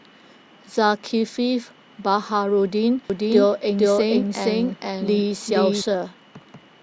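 From 3.10 s to 5.82 s the speech is heard twice at once: a second, full-band copy trails the original by around half a second at about the same loudness. It has no decay or room colour, and it cuts in and out abruptly at those edges. This is a doubled audio track, likely from the same signal being captured again through a slower path, or from an edit that left two copies out of step.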